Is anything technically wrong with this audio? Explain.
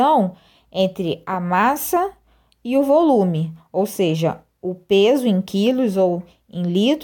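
No, nothing is technically wrong with this audio.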